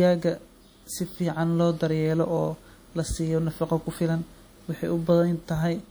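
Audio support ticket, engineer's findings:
Speech, throughout: ringing, washy texture with hiss breathing with the signal; codec damage plainly audible. Likely WMA compression: long transform blocks spread quantisation noise over tens of milliseconds. Damage fits a bitrate near 48 kbps; content reaches 20.1 kHz.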